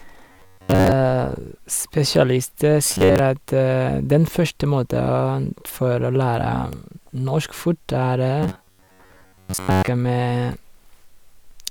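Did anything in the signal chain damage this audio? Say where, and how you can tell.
Yes. The driver or buffer stage likely starved, so the playback path kept looping its last short block of audio instead of fresh input. The result is robotic sound from repeated short buffers, heard from 0.32 to 0.92 s, 2.85 to 3.19 s and 8.43 to 9.88 s. The speech collapses into a rigid metallic buzz at 93.8 Hz, a repeat period near 10.7 ms, with most of the real audio in those stretches skipped.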